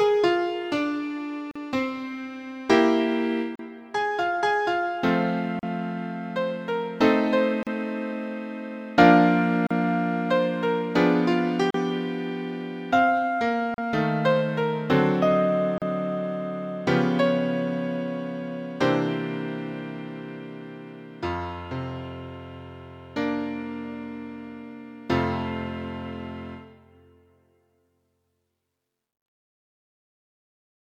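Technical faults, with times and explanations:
1.51, 3.56, 5.59, 7.63, 9.67, 11.71, 13.74 and 15.78 s, gap at a join of encoded pieces: separately encoded segments, roughly two seconds each, were joined without trimming encoder delay and last-frame padding, so a 42 ms silence, then 38 ms ones, cuts in with smeared edges before the sound resumes where it stopped.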